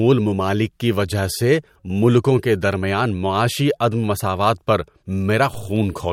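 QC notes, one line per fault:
5.54 s, DC step: the waveform's zero line jumps suddenly by about -27 dBFS, as if an offset input were switched in, then drains away slowly through a very low high-pass near 2 Hz. The abrupt shift is heard as a single low thump while the speech continues.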